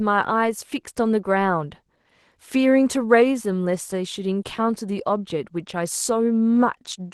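Opus voice compression runs through the whole speech clip, and it sounds like hybrid mode, with the linear-prediction coder handling the low band and a thin transform layer above 8 kHz. The starved excitation coding leaves the voice plainly hoarse and a bit robotic, which points to roughly 16 kbps.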